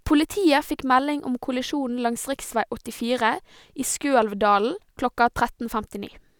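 Nothing stood out as a technical fault on listening to this speech recording.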